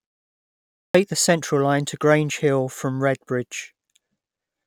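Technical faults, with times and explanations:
0.86–0.95 s, clipped start after a pause: following roughly 0.86 s of silence, the speech bursts in abruptly with its first 85 ms missing. The output device, idle through the pause, had not yet woken and relocked when sound resumed, so the onset was swallowed.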